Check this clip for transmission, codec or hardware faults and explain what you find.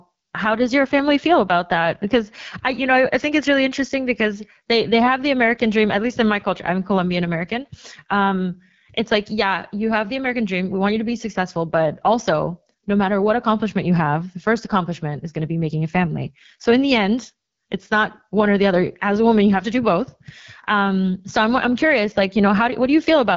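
One codec fault runs through the whole speech clip. AMR wideband (HD Voice) codec, throughout: the speech is rebuilt from a pulse-driven vocal tract model below 6.4 kHz, with shaped noise filling the top band and nothing above 7.4 kHz. The plainly rough, raspy texture points to one of its lowest rates, about 8.85 kbit/s.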